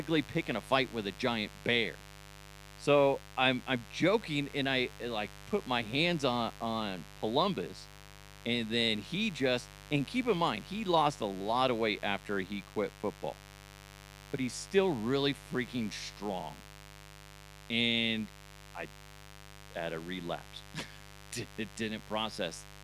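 Unshielded or dimmer-switched wiring is injecting sharp spikes twice per 50 Hz mains cycle, producing mains buzz across the whole recording. Harmonics stack up into the kilohertz range, laying a steady, raspy buzz roughly 20 dB below the speech from start to finish.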